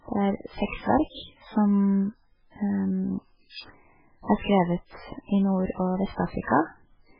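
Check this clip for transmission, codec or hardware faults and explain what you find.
The clip has one codec fault, present from start to finish. The speech has nothing above 5.2 kHz and sounds heavily watery and swirly, likely from MP3 compression at a starved bitrate near 8 kbps. The encoder cuts the treble at a fixed point and drops weak frequency lines that flicker between frames. That flicker tells it apart from a simple low-pass filter, which would sound dull but steady.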